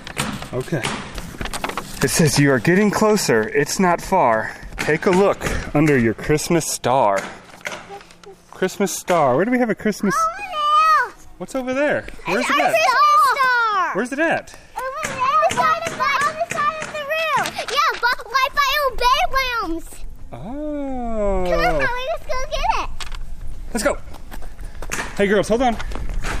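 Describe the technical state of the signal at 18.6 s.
At 18.6 s the signal is intact, with no dropout, distortion, glitch or other technical fault to be heard.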